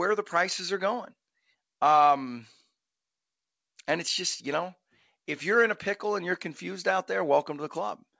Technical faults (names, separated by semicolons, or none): none